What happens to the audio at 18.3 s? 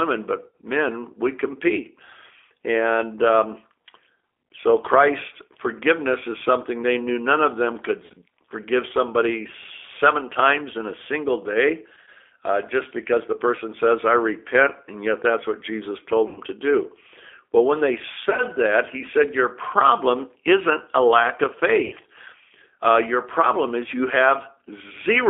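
Between 18.30 and 18.43 s, VoIP packets went missing and the speech decoder had to conceal the gaps. About 60 ms of audio was lost, scattered across roughly 80 ms, with the longest unbroken gap about 40 ms. The decoder filled each hole by repeating its last pitch and filter settings at falling gain, so the speech smears into a brief buzzy tone or coloured noise that fades. Because every frame is built on the one before, the speech stays weak and distorted for a moment after real packets resume.

This moment is also carried through the G.729 codec, as the whole call is. That codec rebuilds speech from a vocal-tract model, a pitch predictor and a few pulses per frame, which fits an 8 kbit/s G.729A stream. Nothing below about 300 Hz or above 3.5 kHz survives, so the speech sounds narrow, plainly rough and synthetic. That same frame-to-frame model is what the concealment extends over the gap.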